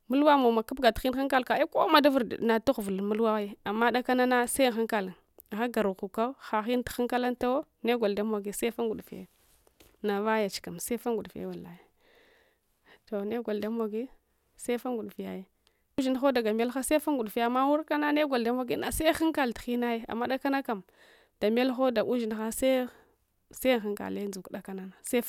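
No technical faults can be heard in this recording.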